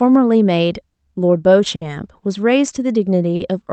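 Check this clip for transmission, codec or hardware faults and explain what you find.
Two short stalls from late packets occur in the speech, carried over an Opus call path whose audio stops at about 8 kHz.

Short stall from a late packet, at 1.75–1.83 s and 3.36–3.42 s: the jitter buffer ran dry, so the receiver stretched the last sound by 60 ms and then 40 ms, and nothing was lost. Each spot sounds like a briefly held syllable, with a slight buzz or dip. On a spectrogram it appears as flat, horizontally smeared bands. On the waveform the same cycles repeat.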